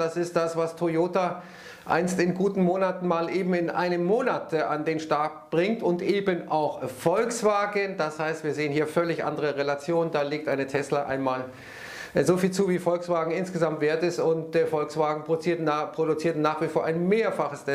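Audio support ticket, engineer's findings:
No faults found in the audio.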